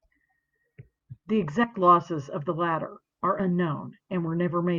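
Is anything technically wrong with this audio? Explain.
Yes. At 1.63–1.65 s and 3.39 s the speech briefly jumps ahead: compressed frames skipped. Whole 20 ms frames were skipped, dropping about 70 ms, then about 40 ms.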